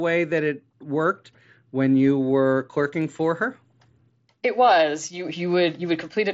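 The clip is speech, and nothing is technically wrong with it.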